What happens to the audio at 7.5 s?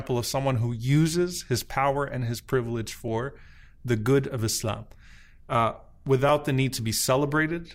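At 7.5 s the speech carries on cleanly, with no dropout, click, distortion or other fault at that point.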